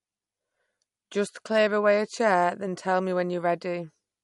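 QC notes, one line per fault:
Throughout: low-bitrate audio saved at a high bitrate. The speech has nothing above 11.2 kHz and keeps the artefacts of the first encoding, which fits an earlier MP3 encode at around 48 kbit/s that was likely later re-saved as 192 kbit/s MP3. The higher rate restored none of the lost detail. Unlike a plain low-pass filter, the coding artefacts are still present below the cut-off.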